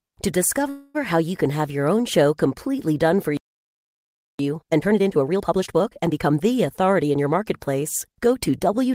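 From 0.69 to 0.96 s, just before "how you can have", there is a call audio freeze: the last sound is stretched into a fading buzz or hiss for about 250 ms. Packets were likely held up until the jitter buffer ran dry. The speech then resumes where it stopped, so a gap is inserted but nothing is lost.

At 3.37 s, right after "show completely done for", the speech cuts to silence for about 1.02 s until 4.39 s. This playback stall points to the player likely running out of data or being blocked, and the audio picks up again where it left off.

From 4.39 to 6.43 s comes a time-compressed catch-up. The player clears the backlog from the stall by removing short segments and cross-fading across them. The speech runs at 1.5 times normal speed while keeping its pitch, which gives it a hurried sound.

From 6.80 to 8.86 s a jitter buffer speed-up follows. Excess buffered audio is trimmed by cutting pitch-period-sized pieces, removing roughly 150 ms in total. 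The speech plays at about 107% speed with its pitch unchanged and sounds hurried.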